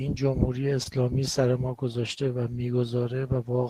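Short concealed packet loss at 0.83 to 0.87 s in this speech recording: about 20 ms of audio arrived too late for the decoder, so the receiver extended the preceding sound to cover the gap and faded back into the real signal, leaving a brief smear.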